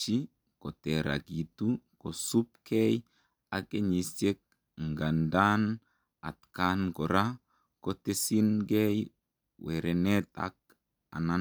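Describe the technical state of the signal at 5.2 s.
The audio is intact at 5.2 s, with no fault present in the signal at that moment.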